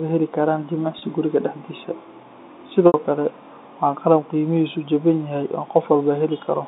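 At 0.99 s and 2.87 s, 30 ms and 70 ms of audio go missing through packet loss with pitch repetition. The receiver loops the last pitch period. Before "guriga daxdisa" this sounds like a brief buzzy hold. Before "kale waa qalab qeymihisu" the repetition fades to silence, then cross-fades back.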